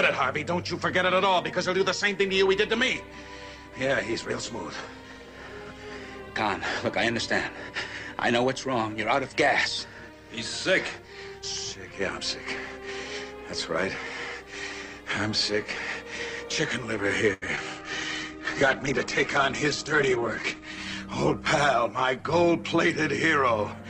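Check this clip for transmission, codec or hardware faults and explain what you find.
Four faults fall in the last third of the clip, starting around 17.3 s.

Short stall from a late packet, 17.33 to 17.44 s: the jitter buffer ran dry, so the last sound was held for 83 ms, with a slight buzz or dip, with nothing lost.

Short concealed packet loss at 17.56 s: about 40 ms never arrived in time and was patched by extending the preceding sound, heard as a brief smear or wobble.

Call bitrate drop, 17.77 to 23.80 s: the encoder was starved of bits, consistent with a fall from about 64 to 10 kbps. The high end is cut from 20 kHz to 8 kHz, leaving the sound muffled and coarse, worst for roughly 2.8 s.

Jitter buffer speed-up, 20.36 to 20.67 s: excess buffered audio was trimmed by removing about 40 ms in small slices, so the sound runs at 111% speed without a pitch change.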